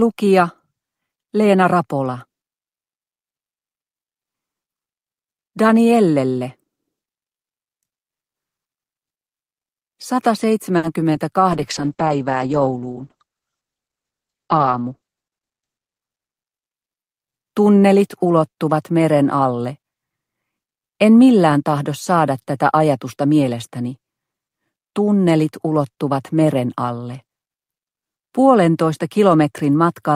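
At 10.77 s a late packet causes a short stall: the jitter buffer runs dry, so the receiver holds the last sound for 60 ms, leaving a brief drawn-out sound with a slight buzz or dip. At 11.13 s a short concealed packet loss means 20 ms never reach the decoder; the gap is filled by extending the preceding sound, which comes across as a quick smear or wobble. From 11.53 s to 17.44 s a call bitrate drop takes the encoder from 48 kbps to 9 kbps, holding the lowest rate for about 3.9 s. The bandwidth narrows from 20 kHz to 8 kHz, leaving the sound muffled and rough. Within that stretch, from 13.73 s to 14.26 s, a jitter buffer speed-up trims pitch-period slices to reduce the backlog. It removes about a tenth of a second, so the audio plays at 115% speed, sounding hurried at unchanged pitch.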